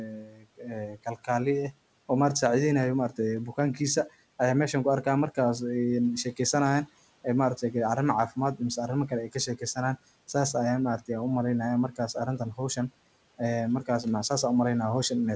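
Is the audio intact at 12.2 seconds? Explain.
No. From 11.92 to 12.77 s, brief bits of speech sound swallowed, dipping about 11 dB: speech cut by the noise suppressor, which mistook them for background noise.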